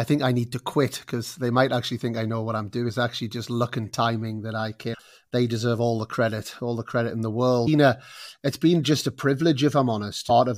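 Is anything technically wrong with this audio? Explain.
Yes. Damaged data in a compressed stream causes short glitches at 2.88–2.90 s after "I know what I'm", 4.93–4.95 s after "and timing that I", 7.66 s after "the credit in the", and 10.29 s. Corrupted bytes break decoder sync. It searches for the next frame header.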